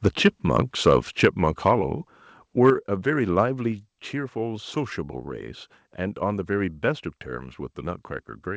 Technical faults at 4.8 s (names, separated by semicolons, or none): none